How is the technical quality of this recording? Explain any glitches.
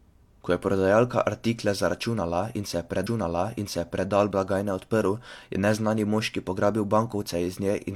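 The recording has one clear glitch. From 3.02 to 4.04 s, after "in se je", about a second of speech plays twice, with a small blip at the jump back, before "blagajne odprl je neznani". This is a stream segment repeated: the player fetched or queued the same chunk again, adding about 1.02 s.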